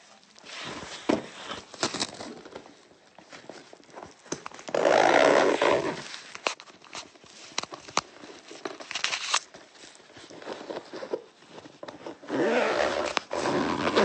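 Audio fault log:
No fault is heard anywhere in the sound.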